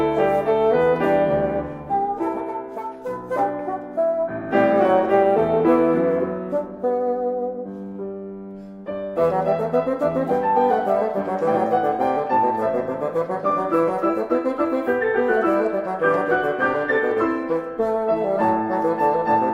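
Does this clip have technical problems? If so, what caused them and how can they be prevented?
No, no technical faults here.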